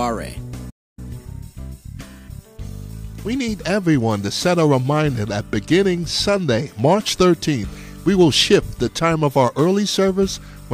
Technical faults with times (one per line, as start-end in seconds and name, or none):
0.70-0.99 playback stall
0.99-3.73 time-compressed catch-up